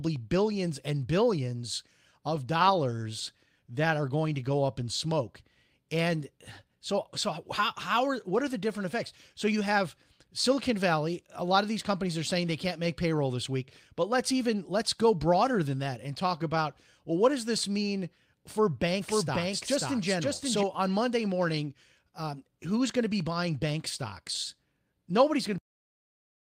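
A speech recording with three faults. At 2.35–2.37 s there is a brief rough, noisy patch with no gap, a lost packet rebuilt from error correction: a single missing 20 ms stretch was played from the lower-quality backup copy carried in the following packet. From 19.01 to 20.63 s the speech is heard twice, with a dry copy about 5 dB quieter trailing roughly half a second behind and starting and stopping abruptly. This is a doubled audio track, likely from the signal being captured a second time through a slower path. At 25.58 s the audio breaks off mid-sound and drops straight to digital silence with no decay. This is a cut-off end, where the final buffers were never written out.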